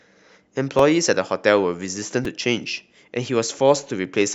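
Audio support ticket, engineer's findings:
Repeated buffer at 0.79 s and 2.25 s: output starved, device replayed its last 2.9 ms block once, then twice, which fits a 128-sample buffer. Heard as brief clicks in the speech.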